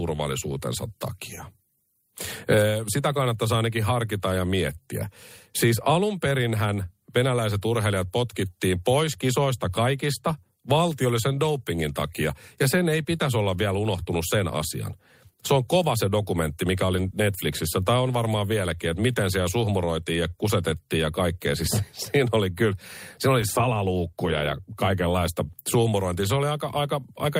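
There's clock drift between sender and receiver: the sender's clock runs roughly 3% slow, so the receiver's jitter buffer keeps draining throughout the clip. From 0.16 s to 27.08 s you get repeated timing corrections, with small pieces repeated unevenly to fill the gap. That stretches the speech to about 97% speed and adds somewhere near 0.7 s overall.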